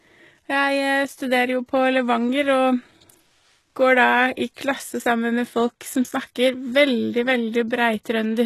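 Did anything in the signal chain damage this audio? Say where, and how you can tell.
Yes, at the codec stage, throughout the speech. Nothing is present above about 12.3 kHz. The treble below that edge sounds synthetic, and the s sounds come out gritty and lispy. The damage is plainly audible. This is likely HE-AAC compression at a low rate, which fits a bitrate around 16 kbps. Only the lower spectrum is truly coded. The upper bands are copies of lower ones shaped by a coarse envelope, so their harmonics misalign.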